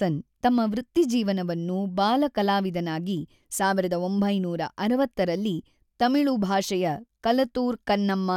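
Nothing goes wrong anywhere in this bit of speech; there's no dropout, glitch or other fault to point to at any moment.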